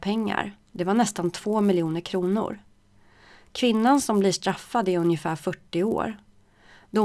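From start to finish, a buzz at 100 Hz rides under the sound: the resampler restarted on every block, so each 10 ms block's edges were converted without their true neighbours, consistent with a halving such as 48 kHz to 24 kHz. A spectrogram shows vertical lines every 10 ms, with matching tiny steps on the waveform.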